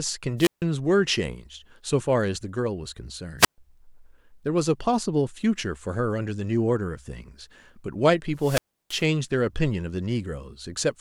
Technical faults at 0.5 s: wireless microphone squelch dropout

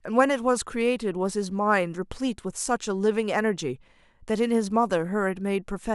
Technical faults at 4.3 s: none

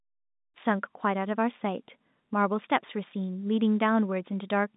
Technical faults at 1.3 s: none

